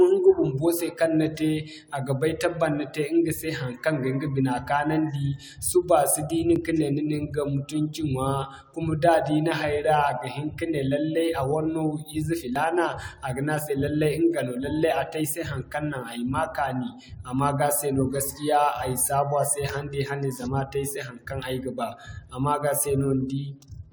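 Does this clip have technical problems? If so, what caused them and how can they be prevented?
Yes, there are two tiny skips in the speech, at about 6.56 and 12.56 s, six seconds apart. That's overlap between stream segments: neighbouring 6 s segments claimed a few milliseconds of the same time, so the player trimmed real audio and the waveform jumped. Stamping each segment so it starts exactly where the last one ends prevents this.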